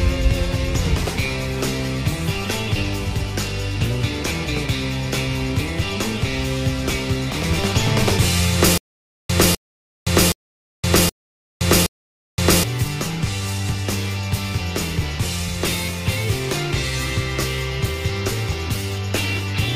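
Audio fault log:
8.78–12.63 s, stutter with silent gaps: the same short burst, about 254 ms long, comes back five times at an even pace of one every 772 ms, with roughly 518 ms of dead digital silence after each repeat. The playback has likely stalled, so at every retry it replays the last fragment it holds and then runs dry, and the audio that belonged in that stretch never arrives and is lost.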